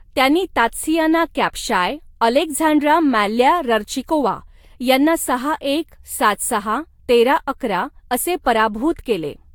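The speech has most likely been through generation loss: it appears to have been decoded and re-encoded with a lossy codec a few times, each pass quantising again on a shifted frame grid so the errors stack up. From start to finish this gives a swirly, hollow, smeared quality with softened consonant attacks, more degraded than a single encode at around 70 kbit/s, which the character suggests, would sound. The artefacts fit Vorbis, and nothing is present above 19.1 kHz.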